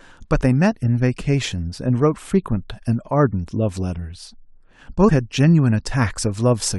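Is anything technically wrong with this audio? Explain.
Yes. From 5.07 to 5.09 s the speech is hit by damaged data in a compressed stream, heard as a short glitch about 20 ms long. Some of the coded bytes there were corrupted, so the decoder misread those frames, lost its frame alignment, and had to hunt for the next valid header before playing cleanly again. A plain dropout would just go silent, and a simple click would be a single sharp tick.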